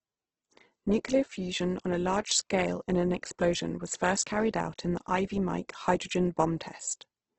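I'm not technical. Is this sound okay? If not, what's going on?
No. For the whole clip the speech carries heavy damage from what is likely Opus compression, a method that shrinks audio files by discarding detail. Working with very little data, it fills the gaps with substitute noise rather than leaving them silent, so the voice sounds rough, grainy and noisy instead of smooth. Everything above about 8.2 kHz is cut off as well, which takes away the crisp top end and leaves the speech somewhat dull.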